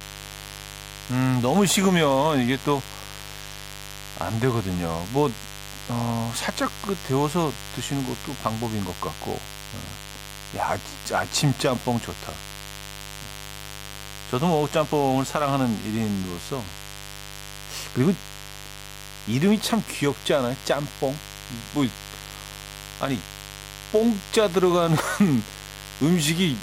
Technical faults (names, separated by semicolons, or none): mains buzz